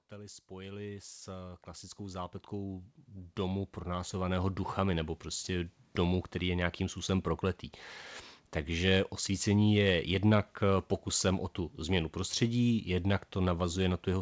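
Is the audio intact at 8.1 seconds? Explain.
Yes, the audio is intact at 8.1 seconds: the speech passes through the WebRTC call path as normal there, with its content stopping at about 8 kHz in the way a G.722 wideband call would leave it.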